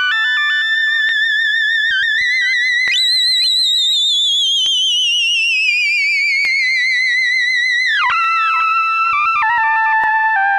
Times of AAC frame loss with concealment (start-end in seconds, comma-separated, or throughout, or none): none